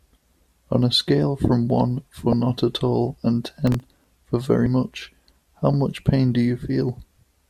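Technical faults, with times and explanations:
2.32 s and 4.63 to 4.66 s, damaged data in a compressed stream: two brief corruptions in the coded speech, the first a single blip, the second about 30 ms long. The decoder meets bytes it cannot parse, loses frame sync and skips to the next valid header. The garbled output comes out as a short chirp, squawk, click or hole.
3.57 to 4.04 s, processor overload crackle: a burst of gritty tearing lasting just under half a second. The audio processing repeatedly failed to deliver its buffers on time, around ten misses in total. Each miss replayed a fragment of stale audio with hard edges. The tiny repeating segments point to buffers of roughly a millisecond and a half. They pile up into crackle over the speech and stop once the load eases.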